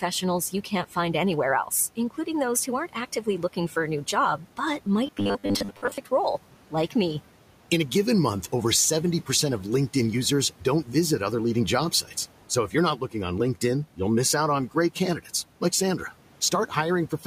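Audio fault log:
3.24 to 3.76 s, speech cut by the noise suppressor: Just after "those who aren't" and before "a new job but", bits of the speech go faint and swallowed, dipping by up to about 10 dB, about a tenth of a second in all. The suppressor mistook these quieter speech sounds for the room noise, which sits about 20 dB below the speech, and turned them down along with it.
5.07 to 5.98 s, robotic sound from repeated short buffers: After "a new job but" and up to "role like me", the speech turns into a stiff, metallic buzz at 100 Hz that still tracks the phrasing loosely, with most of the stretch made of repeats rather than fresh audio. The likely cause is audio arriving too late, so the software loops the last short chunk while real audio is skipped. A 100 Hz buzz fits a chunk of about 10 ms.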